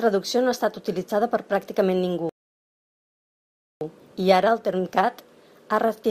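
At 2.29 s a rebuffering stall, the player running dry, adds 1.5 s of silence; speech resumes where it stopped, losing nothing, unlike a dropout.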